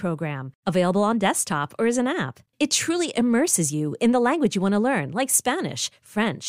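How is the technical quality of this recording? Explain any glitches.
No technical faults are audible anywhere in this speech recording, so there are no glitches to explain.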